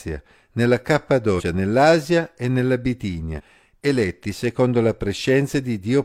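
Speech with compressed frames skipped at 1.35 s and 3.35 s. Each jump loses roughly 100 ms, fitting two 46.4 ms frames.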